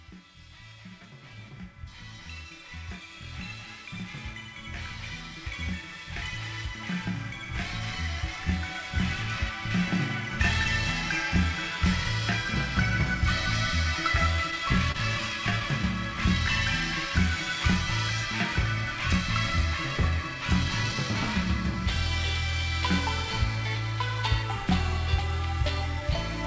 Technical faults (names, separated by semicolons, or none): repeated stalls (stutter)